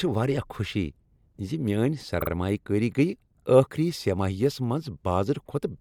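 At 2.20 to 2.29 s the speech stutters: a 48 ms stretch, which fits a pair of compressed frames, plays twice more from repeated frames, adding 96 ms. Unlike a dropout, nothing is lost; the same fragment recurs.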